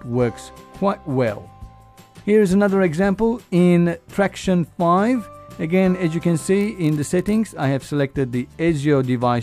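From 6.59 to 7.40 s there's a block size mismatch (padded), with short zero-filled gaps in every block that give a steady buzz at about 43.1 Hz, which fits a 1024-sample read block.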